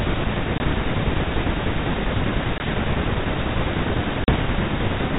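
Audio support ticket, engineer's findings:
Packet loss on an ADPCM call: dropped audio filled with silence, decoder predictor and step size then out of step with sender. Hard-edged gaps at 0.58 s (20 ms), 2.58 s (20 ms) and 4.24 s (40 ms, roughly two packets). Speech resumes with slight distortion, settling within tens of milliseconds. G.726 at 32 kbit/s, band-limited below 4 kHz.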